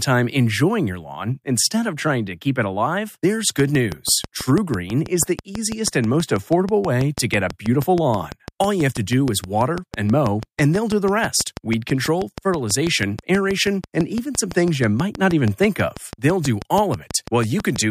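From 3.6 s, just after "keep it alive there's", a train of clicks starts and runs to 17.77 s: about a hundred near-identical pulses at a steady 6.1 per second, peaking roughly 10 dB above the speech. They are likely interference from nearby equipment or a faulty connection or power supply. The sound is a brisk ticking laid over the speech and its pauses. A waveform shows evenly spaced narrow spikes, and a spectrogram shows regularly repeating thin vertical broadband lines.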